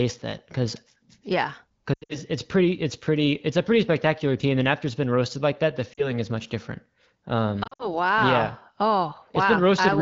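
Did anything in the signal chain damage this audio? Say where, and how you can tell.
Yes. Speech smears, warbles and fades at 1.94 to 2.18 s and 7.63 to 7.95 s, with a brief dip at 5.94 to 6.08 s. These are lost AMR speech frames on the radio link. The wideband decoder bridged gaps up to 80 ms by replaying the last good pitch and vocal tract settings at falling gain.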